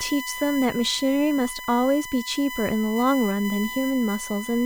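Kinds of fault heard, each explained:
USB whine: a steady, fixed-pitch whine runs under the speech for the whole clip, built on a 1 kHz tone with its strongest component at 2 kHz, and sitting fairly loud, not far below the speech itself. That's the USB bus pulling current in 1 ms frames, and the ripple getting into the audio through power or ground. The 1 kHz spacing points straight at that frame rate.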